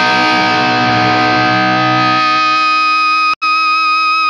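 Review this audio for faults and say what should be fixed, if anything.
There's a stream reconnect at 3.34 s: the audio drops out for 80 ms, then picks up at 3.43 s a little further along, skipping a few tens of milliseconds, because the link broke and a fresh decoder restarted mid-stream. Worth adding a bigger network buffer so short dropouts don't force a reconnect.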